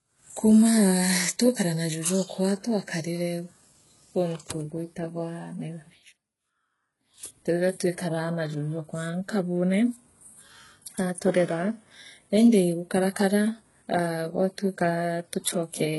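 From start to finish the speech stops dead above 11.5 kHz and carries smeared low-bitrate artefacts inside a high-bitrate MP3. This is likely low-bitrate audio saved at a high bitrate. Unlike a simple low-pass, the damage fits an earlier codec near 12 kbit/s.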